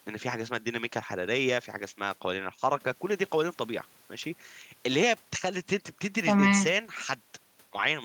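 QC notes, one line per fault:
No faults found on listen; nothing to log.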